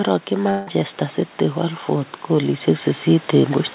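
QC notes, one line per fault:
0.50–0.77 s, long network dropout: the sound smears into a fading buzz for about 0.17 s, then resumes with a short piece missing. Likely packets lost in transit.
1.87–3.61 s, automatic gain rising: speech and background swell together by about 6 dB. The gain control judged the input too quiet and raised it gradually.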